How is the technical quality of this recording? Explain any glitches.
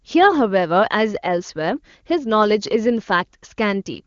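No glitches can be heard: the speech carries the bandwidth and clarity of the AMR wideband (HD Voice) codec at a high rate, which fits its 23.85 kbit/s mode, with at most faint coding damage and no content above 7.1 kHz, where that codec's band ends.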